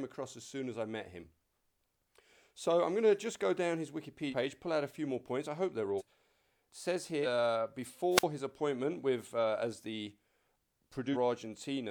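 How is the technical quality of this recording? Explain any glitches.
The recording has two kinds of faults. There are four skips where compressed audio is lost, and one short radio dropout.

Compressed frames skipped: At 4.30 s, between "just go down his" and "pull out", the speech jumps ahead by roughly 150 ms. More jumps follow at 5.97 s after "points I hope they're", at 7.22 s, and at 11.12 s. Each of those loses a few hundred milliseconds. Whole coded frames, of about 46 ms each, were missing or rejected by the decoder.

Wireless microphone squelch dropout: From 8.15 to 8.23 s, just before "his appointment with uh", the signal briefly turns hissy and then goes nearly silent. The audio is muted for about 46 ms. An analogue FM microphone's radio link weakened enough for the receiver's squelch to close. The sound returns once the signal recovers.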